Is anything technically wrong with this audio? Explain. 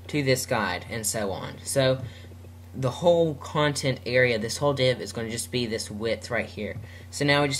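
No, nothing technically wrong can be heard in this audio. No fault shows up at any point in the clip.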